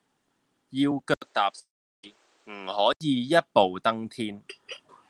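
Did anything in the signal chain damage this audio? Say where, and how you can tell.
Yes. From 1.14 to 3.01 s the sound turns dull, with nothing above 9.2 kHz, an 80 ms silence at the switch and a new noise floor roughly 40 dB down. This is likely an input switched to a poorer device at the capture or driver stage. The new background noise and the gap set it apart from a codec narrowing its bandwidth.

Between 1.59 and 2.04 s about 440 ms of audio is missing. A short fading buzz continues the last sound, then about 380 ms of silence follows, and the audio resumes further on. This is likely a long network dropout, and unlike the device switch, the content itself is lost.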